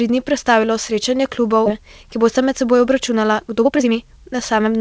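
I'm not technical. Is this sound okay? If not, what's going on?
No, not quite. Two things are going on.

Right after "dni prestavilo srečanje", at about 1.66 to 1.68 s, there's a skip ahead. Roughly a second of audio never got played. It was either lost in transit or thrown away when the call's waiting buffer got too full. The speech before and after that point is stitched together with no pause, so it sounds like the speaker jumped forward.

Then, from about 1.78 s to 4.75 s, you get a jitter buffer speed-up. The buffer was holding more audio than it wanted. To catch up, it kept snipping out tiny slivers of sound, each only a fraction of a syllable. That trims away roughly 0.4 s in total, and the speech runs at about 114% of normal speed. The pitch stays the same, so it doesn't sound squeaky. It just sounds a bit rushed.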